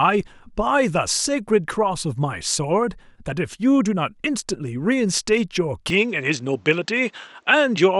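At 5.90 s the speech suddenly loses everything above about 8.2 kHz and turns duller through to the end, with no gap at the change and hardly any level jump, plus a faint new noise floor. That's likely the input switched to a poorer device.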